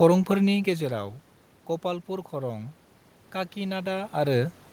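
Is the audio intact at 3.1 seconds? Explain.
Yes, the audio is intact at 3.1 seconds: there is no system fault there, and the room noise audible underneath the speech is simply part of the recording.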